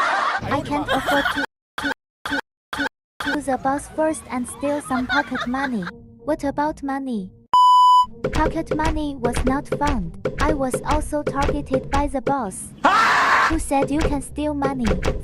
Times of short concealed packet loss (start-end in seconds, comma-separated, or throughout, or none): none